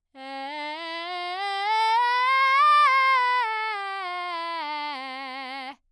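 No technical faults are audible anywhere in the music.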